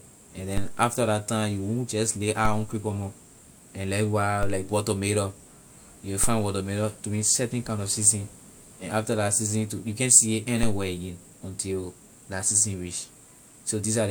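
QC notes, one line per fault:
0.57, 2.45, 4.43, 6.24 and 10.63 s: DC step, the zero line jumps by about -16 dBFS (about -14 dBFS at 10.63 s) and then eases back through a roughly 2 Hz high-pass. Each jump gives a low thump or click, and the speech carries on undisturbed, with no gap as in a dropout.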